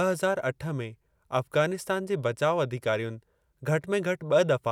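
No technical faults are audible.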